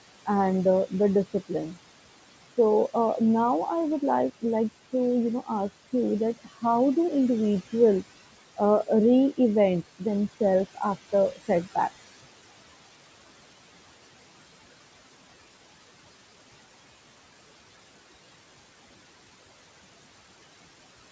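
Speech runs through a noise suppressor for the whole clip, and its artifacts are audible. The suppressor pulls the background down by about 18 dB between phrases and lets it return under the speech, so the noise pumps. On a spectrogram the gaps look unnaturally clean, while the noise floor visibly rises beneath each phrase. From 6.23 to 10.59 s, right after "you know ask you", a DECT cordless phone buzz appears. It is a thin, steady buzz at a 100 Hz burst rate, sitting roughly 30 dB below the speech. It comes from a nearby handset or base station whose 10 ms radio bursts are being rectified in the audio circuitry. On a spectrogram it shows as a comb of evenly spaced horizontal harmonic lines, 100 Hz apart, starting and stopping abruptly, and a zoomed waveform shows a regular pulse train every 10 ms. The band-limiting at 8 kHz is what a G.722 wideband call path does.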